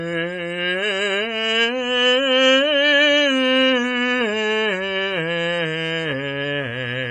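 From start to finish the music sounds washy and ringing, with a hiss that swells and fades along with the signal. Nothing is present above 10.6 kHz, so the top end is dull and cut off. This is likely WMA compression at a low bitrate, around 24 kbps judging by the heavy damage. A transform codec working with long blocks smears its quantisation noise over tens of milliseconds and discards weaker spectral detail entirely.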